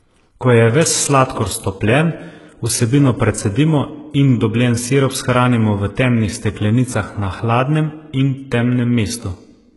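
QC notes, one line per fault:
Throughout, HE-AAC compression: the treble of the speech sounds gritty and metallic, with lispy s sounds and nothing above 11.5 kHz. This is likely heavy HE-AAC coding at a very low bitrate, near 12 kbps, which copies lower bands upward to fill in the top.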